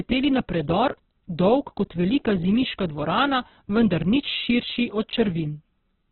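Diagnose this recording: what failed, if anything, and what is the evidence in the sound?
Across the whole recording the speech sounds rough, grainy and noisy, with nothing above about 4.2 kHz, so it comes across as narrowband and dull as well as harsh. The failure is at the codec stage, likely heavy Opus compression in its music-oriented CELT mode at a very low bitrate, around 8 kbps. Starved of bits, the encoder keeps each band's energy but fills the detail with noise or folded copies of lower bands, and it has cut the audio bandwidth.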